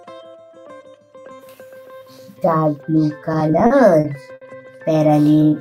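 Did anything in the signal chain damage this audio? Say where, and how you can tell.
Yes, repeated stalls (stutter) from 3.25 to 4.44 s: eight brief hangs, longest 70 ms, where late network packets starved the jitter buffer and the receiver stretched the sound.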